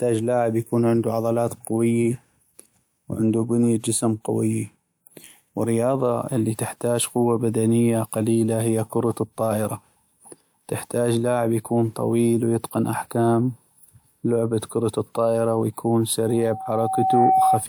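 A microphone picking up its own loudspeaker pushes the loop gain past one at 760 Hz, so this speech clip ends in a loudspeaker feedback squeal: after "لعب كرة الطائرة ويكون", from 16.26 to 17.65 s, a steady tone swells over roughly a second until it sits a few dB above the speech.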